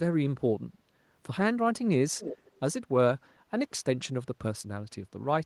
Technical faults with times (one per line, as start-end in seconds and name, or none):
2.18-2.57 echo leak